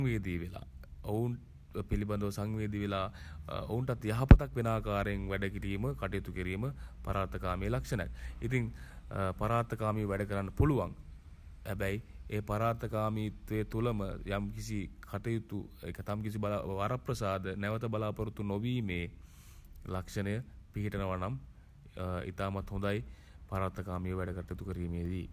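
No technical faults can be heard anywhere in the recording, with the signal holding steady throughout.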